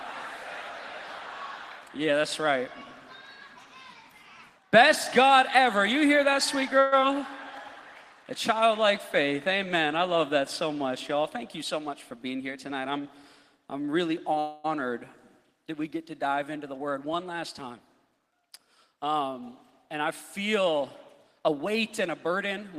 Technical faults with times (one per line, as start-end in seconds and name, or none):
6.79-6.94 call audio freeze
7.00-7.03 skip ahead
7.44-7.75 jitter buffer slow-down
11.62-12.70 jitter buffer speed-up
14.39-14.66 call audio freeze
16.57-18.20 jitter buffer speed-up
21.40-22.77 jitter buffer speed-up